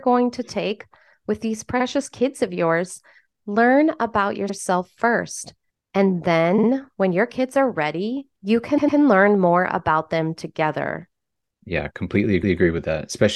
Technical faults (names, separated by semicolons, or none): repeated frames